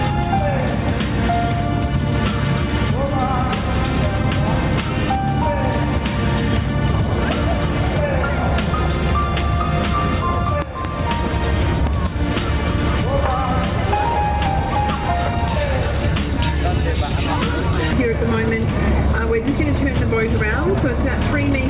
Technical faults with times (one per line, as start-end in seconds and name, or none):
0.00-21.70 gain pumping
10.62-10.87 loud pop
11.87-12.09 loud pop